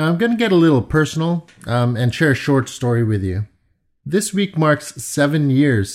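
No technical faults occur at any point in the speech, so there is nothing to describe in time order.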